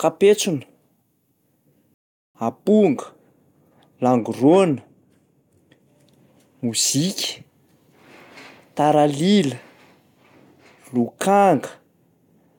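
A rebuffering stall interrupts the speech from 1.94 s to 2.35 s. The player used up the audio it had downloaded and had to wait for more data before continuing, so the speech drops abruptly into silence for about 0.41 s. When playback resumes, it picks up at exactly the point where it stopped, with nothing skipped or repeated. The result is a gap that adds time without removing anything.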